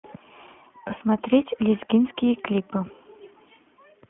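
Throughout, the speech passes through the iLBC codec. Band-limited to roughly 200 Hz–3.4 kHz, it sounds plainly rough and synthetic, which fits iLBC's 15.2 kbps, 20 ms frame mode.

From 0.88 to 0.92 s, a lost iLBC frame leaves a gap of about 20 ms. It is concealed by repeating the last pitch cycle with noise as a brief buzzy held vowel, and it recovers immediately.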